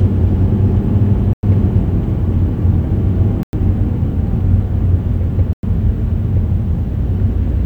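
A recording of sounds with a gap between chunks: 100 ms holes of silence at 1.33–1.43 s, 3.43–3.53 s and 5.53–5.63 s. The audio was delivered in 2.0 s chunks with silence inserted at each join, so nothing is lost, but the sound is interrupted every 2.1 s.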